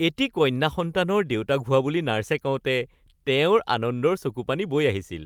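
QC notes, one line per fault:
Nothing to flag on this speech recording, as far as I can hear.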